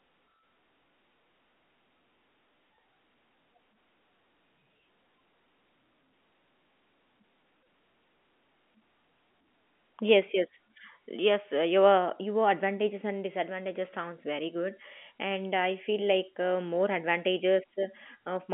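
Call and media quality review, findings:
No faults found in the speech. The G.711 telephone coding is working as expected: the sound is confined to the telephone band of roughly 200 Hz to 3.4 kHz, with nothing above 3.8 kHz, and any quantisation noise under the speech is faint at most.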